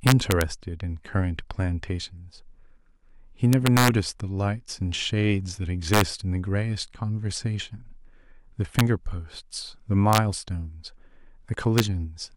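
Integer overflow strikes the speech six times: 0.07 to 0.41 s, 3.53 to 3.88 s, 5.94 to 6.01 s, 8.79 s, 10.13 to 10.18 s and 11.78 s. Loud peaks pushed about 1 to 6 dB past the integer limit wrap to the opposite extreme instead of being held flat, giving violent cracks harsher than clipping. On the waveform, peaks snap from top to bottom rail; the spectrogram shows full-height vertical broadband streaks.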